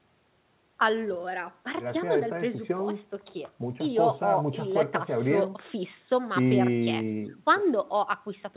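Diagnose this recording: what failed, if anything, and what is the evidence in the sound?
Nothing stood out on listening to this speech recording, which carries the narrow, telephone-band sound expected of a G.711 mu-law call path, with nothing above 4 kHz.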